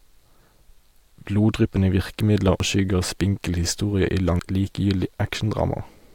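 The decoder failed to play whole compressed frames, a fault of compressed frames skipped, twice in this speech. At 2.60 s about a third of a second of audio vanishes, which fits roughly four frames of 85.3 ms each. At 4.39 s the loss is longer, around 0.7 s, or about seven frames. Each time the speech lurches forward.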